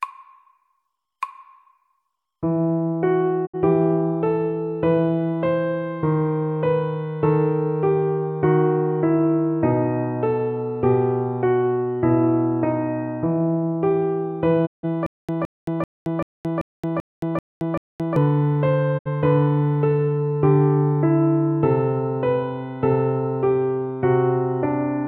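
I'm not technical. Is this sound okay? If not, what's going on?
No, there are a couple of problems. Digital broadcast dropout: at 3.45 s, 14.65 s and 18.97 s the sound briefly fades out and cuts to silence, about 0.06 s, 0.16 s and 0.06 s, as the receiver loses signal.

Stutter with silent gaps: from 15.06 s to 18.16 s a short 0.17-second snippet plays eight times, each followed by silence, repeating about every 0.39 s. The player likely stalled and kept replaying its last bit.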